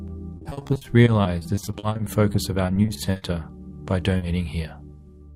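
From 0.37 to 3.24 s there's repeated packet loss, giving that robotic sound. Roughly thirty short holes, none longer than 40 ms, each patched by stretching the last bit of audio, so about a quarter of the stretch is filler. It comes across choppy, with pieces missing.

Then at 4.18 to 4.24 s there's a short concealed packet loss. About 40 ms never arrived in time, and the decoder bridged it by continuing the preceding sound before blending back in, so you hear a brief smear or wobble there.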